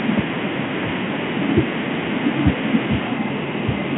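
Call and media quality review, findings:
No faults found; G.726 path at 32 kbit/s normal.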